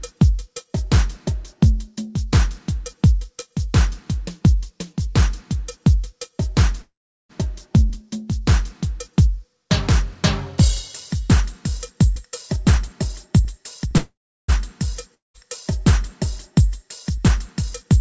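At 6.82 to 7.31 s there's a call audio freeze: the last sound smears into a fading buzz, then about 0.38 s of silence before the audio picks up right where it stopped. That's likely packets stalling and the jitter buffer running dry, so nothing's lost but the playout lags about half a second more.

From 12.04 to 13.93 s you get a jitter buffer speed-up. The audio runs about 9% fast with the pitch unchanged, because tiny pitch-period chunks are being trimmed to claw back roughly 0.15 s of backlog. It sounds a bit rushed.

Another call audio freeze hits from 13.98 to 14.50 s, the same fading buzz into about 0.35 s of quiet, then a seamless resume with nothing missing.

At 15.14 to 15.36 s there's a long network dropout. A short buzz fades into about 0.16 s of silence, and when the audio comes back about 0.2 s of it is simply gone.

From 16.61 to 17.97 s the buffer speeds up again, about 6% fast at the same pitch, trimming roughly a tenth of a second. 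Throughout, the band stops at 8 kHz, which fits a G.722 call path.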